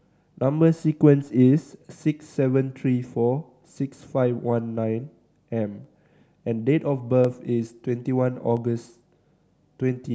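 Single sharp clicks at 5.84, 7.25 and 8.57 s in this speech are likely dropped samples: well under a millisecond of the stream goes missing, so the waveform jumps abruptly. Unlike a dropout, no audible gap or lost sound follows each click.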